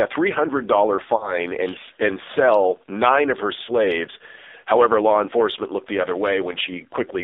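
Speech that sounds thin, buzzy and synthetic from start to finish, boxed into a narrow telephone band running from about 300 Hz up to 3.7 kHz, with nothing above that. This is the AMR narrowband mobile codec working hard: heavy damage from a vocal tract model fed by very few pulses per frame, which fits the low 5.9 kbps AMR-NB mode, so the voice takes on a robotic edge. Twice the sound briefly smears and dips before recovering roughly: from 1.16 to 1.38 s, just before "and and sell nine", and from 3.64 to 3.72 s, right after "sell nine of her". These are lost AMR speech frames. Radio errors corrupted the frames, so the decoder repeated its last good pitch and filter settings at falling gain. A dropout of about 40 ms in each case fits two consecutive 20 ms frames going missing.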